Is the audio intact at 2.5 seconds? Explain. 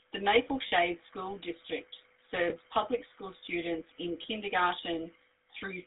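No. From 2.5 to 2.54 s, just before "public school students in", there are lost GSM frames: the decoder had no valid data and reused the last good frame's settings, which fits a single lost 20 ms frame. It sounds like a brief rough, metallic ring. On a spectrogram, a smeared, repeated band pattern replaces the normal formant motion. The waveform shows a short stretch of repetitive cycles.

That moment also carries the GSM full-rate codec's damage, which runs through the whole clip. Its pulse-driven vocal-tract model gives the sound a buzzy, gravelly roughness, and the line band keeps only 300 Hz to 3.7 kHz. The spectrogram shows nothing above about 3.7 kHz and a thin low end. The coarse excitation shows as grainy texture in the harmonics.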